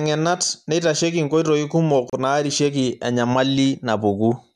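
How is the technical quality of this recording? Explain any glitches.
The speech has one glitch. At 2.10 s it drops out for about 33 ms with smeared edges, then resumes mid-flow: a gap at a join of separately encoded pieces, where encoder delay and end padding were left untrimmed.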